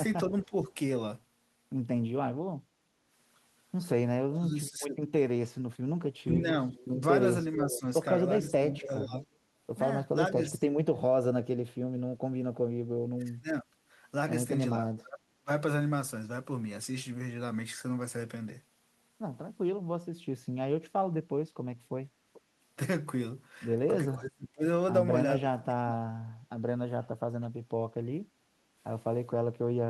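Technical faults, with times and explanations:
0.29–0.72 s, 4.3–15.49 s, 24.15–25.94 s, 29.29–29.46 s: speech suppressed in double talk. The talker dips by up to roughly 10 to 35 dB in broken patches, most in the long middle stretch. This is likely an echo canceller muting both sides during overlap. It shows as notched, hollowed-out gaps in the waveform envelope and spectrogram.
2.92–3.03 s, 28.29–28.75 s: background gated by the echo canceller. The room tone sinks by about 6 to 7 dB while far-end audio plays, then recovers. It shows as brief uniform darkening of the noise floor across all frequencies, with a step-shaped waveform floor.
6.14–8.52 s, 22.33–22.41 s: echo leak. A copy of the speech returns 439 ms late, roughly 10 dB down in the first stretch and near 25 dB down in the brief second one. This is likely residue the far side's echo canceller failed to remove. The spectrogram shows a ghost of the speech harmonics shifted right.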